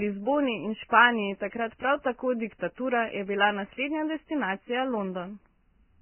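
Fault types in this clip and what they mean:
Vorbis compression: throughout, nothing above 3.1 kHz survives, and coarse quantisation turns the remaining treble detail into grainy hiss, which fits a very low bitrate near 10 kbps, likely Vorbis.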